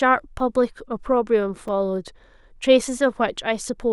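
At 0.39 s and again at 1.68 s there's a repeated buffer: fresh audio arrived late, so a tiny chunk (roughly 5 ms, judging by the repeats) replayed, three times then once, giving a quick click-like buzz.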